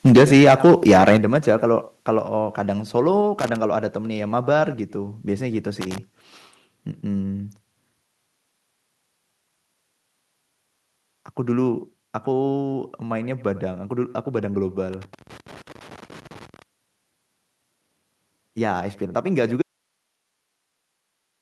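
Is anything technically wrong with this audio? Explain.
Yes, there are four kinds of fault. From 0.05 to 1.17 s the input level was likely set too high, so peaks drove about 8 dB past the converter's limit. This microphone overload flattens the tops of roughly one sample in fourteen, giving the loudest syllables a harsh, crackling edge.

At 0.17 s and again at 1.17 s, the microphone volume is stepped down. The call software likely reacted to the overload by cutting the device's input gain, first by about 2 dB and then by about 6 dB. Each step is a sudden, audible drop in overall level, with the second landing right as the distortion ends.

Loose connector crackle appears at 3.39 to 3.56 s, at 5.81 to 5.98 s and at 14.93 to 16.62 s. A worn or dirty contact keeps making and breaking, chopping the signal into irregular bursts of scratchy crackle. The third burst lasts well over a second.

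From 19.62 s to the end, there is an audio dropout to a faint residue. The signal was likely lost while the downstream path stayed live, so the sound cuts out abruptly mid-flow. Only hiss remains, about 50 dB below the normal level, with no fade-out.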